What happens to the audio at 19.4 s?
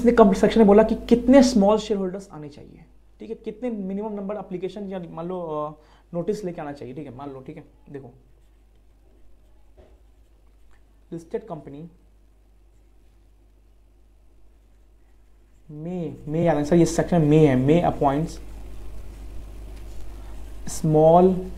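At 19.39 to 19.41 s the decoder skips compressed frames: a few frames, around three, are missing from the stream or rejected as damaged, so playback never renders them. The audio jumps forward by roughly 70 ms of material, with the sound seeming to lurch slightly ahead mid-flow.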